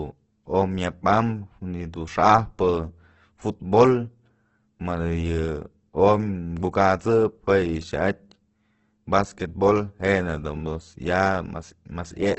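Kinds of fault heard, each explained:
Opus compression: throughout, the speech turns grainy with nothing above 8.2 kHz, likely Opus music mode noise-filling bands at a starved bitrate near 12 kbps.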